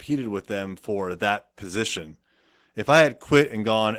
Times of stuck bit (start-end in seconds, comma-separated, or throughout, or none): none